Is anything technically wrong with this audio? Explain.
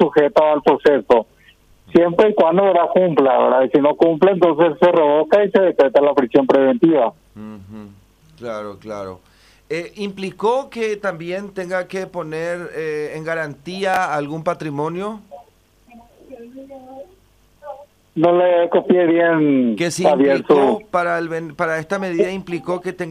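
Yes. At 13.94 to 13.97 s, chunks out of order: a 10 ms chunk arrives two chunks late and plays after its successors, leaving three hard joins. It sounds like a brief jumbled moment, and the waveform shows three abrupt discontinuities.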